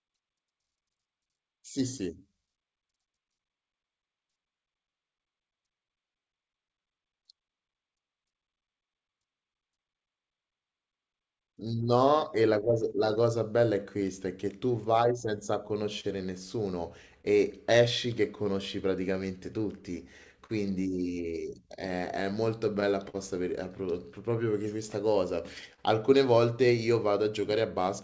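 Clock drift between sender and receiver runs through the whole speech clip. The sending clock runs about 3 percent slow compared with the receiver's. Audio arrives a little too slowly, so the jitter buffer keeps draining. The receiver has to keep stretching what it has to fill the shortfall. The result is a faint unsteadiness in pacing, spread unevenly across the recording rather than tied to one moment.

Repeated timing corrections follow from that drift. They run from 0.22 s to 27.83 s. Playback sits at about 98 percent speed. Short pieces are repeated or lengthened to keep the buffer from running dry. Together these add roughly half a second. Each edit is tiny and spaced unevenly. They come across as slight hiccups and a tempo that drags very gently, always in the same direction.

Scattered short gaps appear between 15.36 s and 25.80 s. Around ten small holes occur here, one at a time, from packets that came late. 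The receiver covers each by carrying the previous sound forward. No audio is actually lost. The longest patch is only a few tens of milliseconds, and the patches total a fraction of a second. They show up as brief ticks or smears. The band stops at 8 kHz, which points to a wideband call codec such as G.722.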